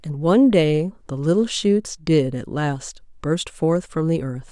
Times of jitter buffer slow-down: none

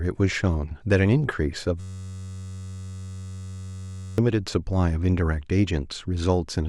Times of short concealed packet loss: none

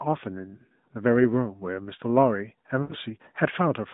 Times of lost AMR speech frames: 2.82-2.95

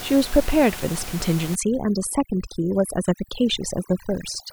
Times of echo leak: none

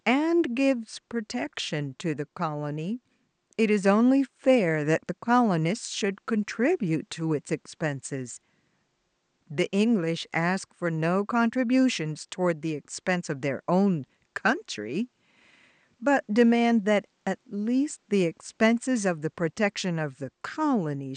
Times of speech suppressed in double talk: none

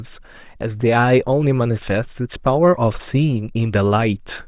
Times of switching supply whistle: none

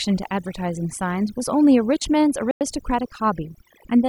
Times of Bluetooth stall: 2.51-2.61

